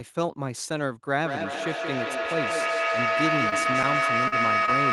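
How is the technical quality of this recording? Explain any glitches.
Not great: a feedback howl takes over most of the clip, and there are three small packet-loss dropouts on top of it.

The feedback howl starts at about 1.16 s and runs right to the end. A second device in the room is picking up the call's own loudspeaker output, and each pass around that loop comes back a bit louder than the last. Instead of dying away, the repeats pile up and narrow onto a tone somewhere around 1.5 kHz, with the loop going round roughly every fifth of a second. By its loudest it's about 4 dB above the speech itself.

There's also short concealed packet loss at 3.49–3.54 s, 4.28–4.34 s and 4.66–4.69 s. Each time, a slice of audio around 20 ms long didn't reach the decoder in time, and the receiver patched the gap by extending what it had just heard before fading back into the real signal. You get a quick smear or wobble rather than silence. 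The middle one is the longest patch, about 41 ms, and sounds like the jitter buffer also shifted its delay by around 20 ms there. The high end of the whole clip tops out near 12 kHz, which fits an Opus call link at modest bitrate.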